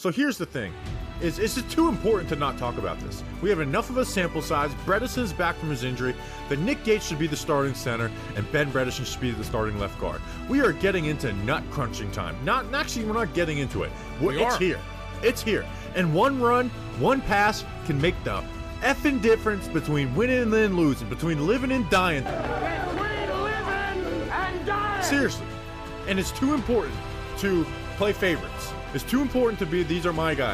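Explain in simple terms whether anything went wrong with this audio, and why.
Nothing went wrong here.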